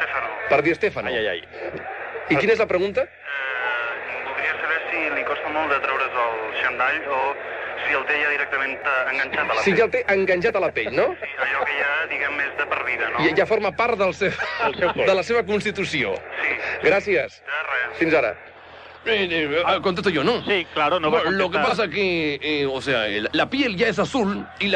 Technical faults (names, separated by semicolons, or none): frames out of order